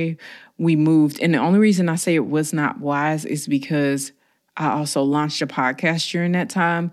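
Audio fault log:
No faults detected.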